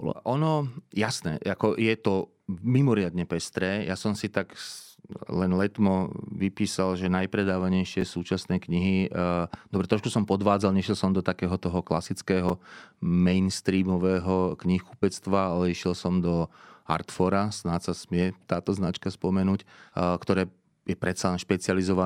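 Speech with two brief chunks out of order, at 8.01 s and 12.49 s, where a 5.8 ms slice plays one slot late, consistent with a small audio buffer. Each sounds like a tiny jumbled moment, and a waveform shows three sharp discontinuities per event, seen as thin vertical lines on a spectrogram.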